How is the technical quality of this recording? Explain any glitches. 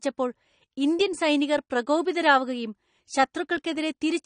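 The recording has plainly audible lossy-codec damage running through the whole clip. The sound is dull and smeared, with nothing above 9.8 kHz and a warbling, fizzy texture on sibilants and sustained sounds. The likely cause is AAC compression at a low bitrate, around 32 kbps. The AAC-LC encoder quantises each frame's frequency lines against a hearing model. At this rate it cuts the top of the spectrum and leaves gaps in the bands it codes or fills them with substitute noise.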